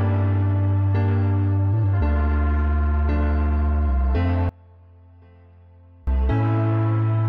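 At 4.49 s the sound suddenly drops away, down by about 28 dB, and stays faint until 6.07 s. That collapse is what you'd expect from one channel inverted: the likely cause is one side flipped in polarity, so when the two channels get folded to mono, everything they share cancels out. What's left is just the difference between them, a faint trace of the original, before full level comes back.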